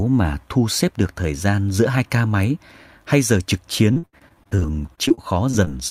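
From 3.93 s to the end at 5.9 s, the speech turns choppy and robotic, with small pieces missing. This is repeated packet loss: short holes recur about every tenth of a second, the longest 76 ms, each filled by stretching the preceding sound, so about a fifth of the passage is patched.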